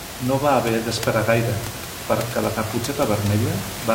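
There are no technical faults to describe in time order in this speech clip.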